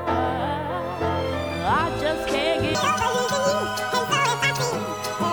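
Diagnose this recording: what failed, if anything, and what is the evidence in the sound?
A section at the wrong speed runs from 2.75 s to the end at 5.32 s. At the transition the sound abruptly turns high and hurried, and tempo and pitch jump together: playback is 1.89 times too fast, raising pitch by about ten semitones. The shift is instant, with no ramp. Because tempo and pitch move as one, a resampling or clock error is indicated, likely a later playback or editing stage reading this segment at the wrong rate.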